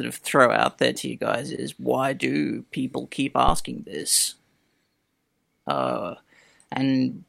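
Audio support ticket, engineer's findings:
Phantom power thump, 3.48 to 3.72 s, right after "why do people keep". Supply switched on or off on a live mic input; the voltage step passed through the input coupling capacitors. Result: deep low-frequency thump, peak about -11 dBFS, decaying in roughly 53 ms. Check phantom switching and preamp input stage.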